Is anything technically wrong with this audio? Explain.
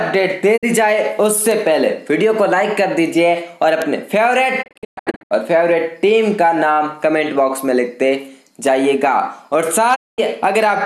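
Yes, there are two kinds of fault.

Digital broadcast dropout at 0.56 to 0.65 s, 4.61 to 5.33 s and 9.94 to 10.20 s: the receiver muted on lost or corrupt frames, fading out over 20 ms. The middle one breaks into several holes, with the longest about 120 ms.

Bit error spike at 1.51 s, 3.82 s and 8.67 s: a flipped bit in one sample, or two at 3.82 s, jumps the value and snaps back, giving one sharp broadband tick.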